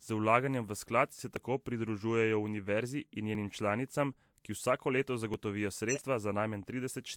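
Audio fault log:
1.36 s, 3.35 s, 5.34 s: audio missing between chunks. Tiny skips spaced almost exactly 2 s apart, each losing a sliver of roughly 15 ms with the edges butted together. The second falls between "univerzi in" and "članicam ki vsako leto", the third right after "članicam ki vsako leto". The regular spacing points to a likely chunk boundary in recording or processing.
5.88–6.02 s: compressed frames skipped. About 50 ms of sound just jumps ahead. That's whole frames of the compressed audio being left out of playback.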